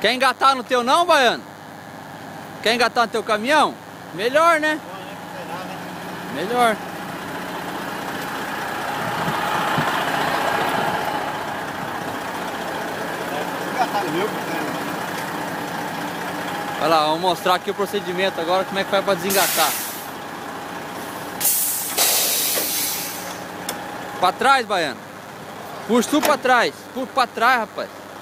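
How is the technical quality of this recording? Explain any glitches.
The recording carries one clear fault, present from start to finish. It is DECT cordless phone buzz. A DECT handset or base station close to the recording chain sends a brief radio burst every 10 ms. The audio circuitry rectifies each burst, so the radio pulses turn into audible clicks at 100 per second. Together they form a thin, steady buzz at 100 Hz, rich in harmonics. It sits roughly 20 dB below the wanted sound and never lets up.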